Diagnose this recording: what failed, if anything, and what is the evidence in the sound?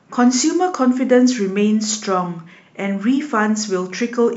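Nothing failed; the sound of this speech recording gives no evidence of a fault at any stage.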